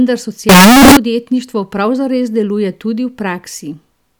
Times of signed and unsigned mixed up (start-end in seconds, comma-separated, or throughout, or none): 0.49-0.97